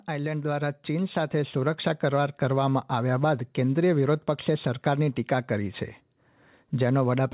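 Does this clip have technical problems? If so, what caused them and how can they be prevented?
Yes. From 0.06 to 3.49 s the speech and background swell together by about 8 dB. This is automatic gain rising: the gain control judged the input too quiet and slowly raised it. Over the telephone-style call codec, nothing is heard above 4 kHz. Prevent it by setting a proper input level before speaking, or by disabling automatic gain control and fixing the gain manually.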